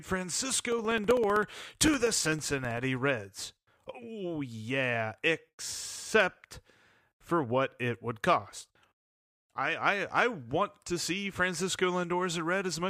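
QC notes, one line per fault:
0.72 to 2.84 s, periodic USB or driver dropouts: the USB bus or audio driver stalls every 64 ms, and each stall replaces roughly two milliseconds of speech with silence. Some thirty such gaps cut through the speech as a steady, evenly spaced run of small ticks.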